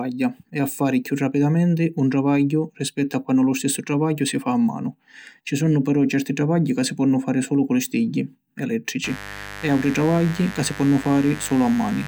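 At about 9.04 s a mains buzz kicks in under the speech and sits there right to the end of the clip. It's a steady, raspy buzz built on 50 Hz, with harmonics stacking up into the kilohertz range. That points to switching spikes, from a dimmer, a rectifier or a missing shield, getting into the signal path twice every mains cycle. It runs roughly 15 dB below the speech.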